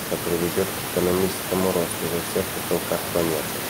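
No technical faults are audible.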